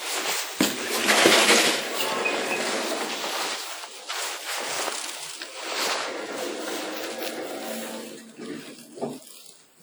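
From start to finish the audio rings and smears, with a hiss that swells and fades alongside the sound, likely WMA compression at a low rate, around 48 kbps.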